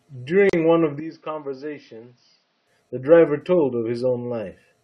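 At 0.49 s the speech drops out for about 38 ms, a gap at a join of encoded pieces. Untrimmed encoder silence sits between them, with smeared edges.

From 1.00 to 2.67 s the speech turns duller and roughly 10 dB quieter, with nothing above 6.1 kHz and a faint new noise floor. The input likely switched to a poorer device, with no silence at the switch.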